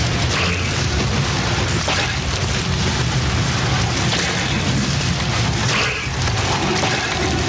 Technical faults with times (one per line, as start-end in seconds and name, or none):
0.00-7.49 gain pumping